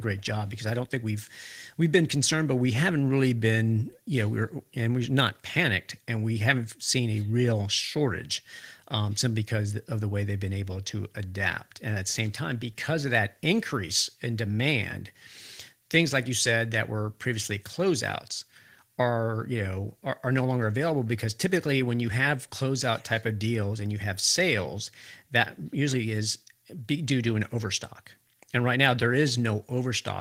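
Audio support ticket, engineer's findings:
No faults found on listening through the speech recording. Nothing to attribute to any component in the signal chain.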